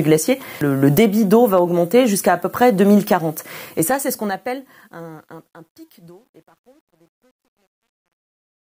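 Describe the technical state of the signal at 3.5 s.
At 3.5 s the fade-out has just begun and truncation distortion on a fade is present, running from 3.47 s to 8.67 s. The fade is being quantized without dither, consistent with a 10-bit stage. The falling signal turns into coarse steps, growing gritty, worst from 5.23 s onward.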